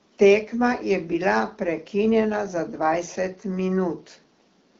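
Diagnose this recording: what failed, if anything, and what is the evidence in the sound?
Nothing failed in this recording.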